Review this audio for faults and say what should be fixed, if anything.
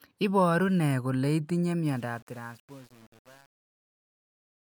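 Truncation distortion on a fade runs from 1.85 s, after "ne kole itinye", to the end at 4.6 s. The fade-out sinks into grit, which fits a stage keeping only 7 bits without dither. Render fades at higher resolution and dither before reducing word length.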